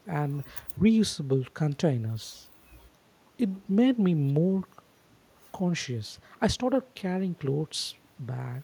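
Listening to the speech recording turned up nothing that stood out as a technical problem.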